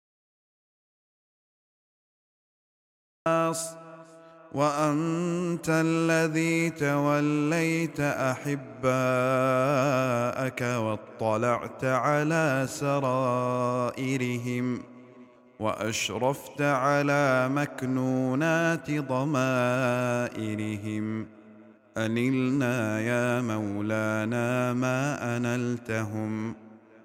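The audio opens on an audio dropout to silence that lasts until 3.26 s. The gap is silent, with no room tone at all. The sound then comes in mid-flow. The input was likely lost while the recording kept writing silence.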